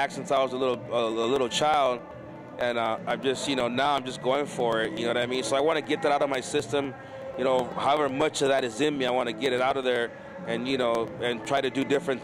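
From about 0.12 s right through to roughly 12.07 s there's a steady run of periodic USB or driver dropouts, spaced 0.125 s apart, so eight a second. Each one loses a tiny slice, on the order of half a millisecond, and the audio simply skips over the gap rather than going silent. You hear it as an even ticking riding on the signal, which fits something on the bus or driver stalling the stream at a fixed interval.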